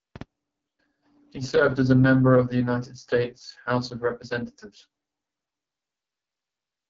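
Speech, heavily coded throughout by the AMR wideband (HD Voice) codec, sounds rough and raspy, fitting its 6.6 kbit/s mode; a spectrogram shows nothing above 7.7 kHz.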